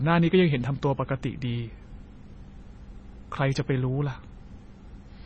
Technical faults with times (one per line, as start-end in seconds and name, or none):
0.00-5.25 MP3 compression